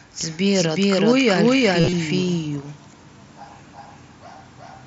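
The clip is speech with a doubled audio track running its whole length. A second full-band copy of the signal sits roughly 0.4 s behind the first at about the same level, so every syllable is followed by a clean, dry repeat with no decay or room colouring. The likely cause is the same signal being picked up twice, once through a slower path, or two out-of-step copies left in an edit. Between 1.80 and 1.93 s there is concealed Bluetooth headset packet loss. About 90 ms of audio is missing, scattered across a 120 ms stretch, with the longest gap 37.5 ms, which fits around a dozen dropped frames. The receiver fills each gap by repeating a recent short slice of waveform, giving a brief buzzy, tonal stretch at full level and a slight warble where real audio resumes. Underneath both faults the mSBC headset path can be heard, with bandwidth topping out at 8 kHz and light graininess on louder sounds.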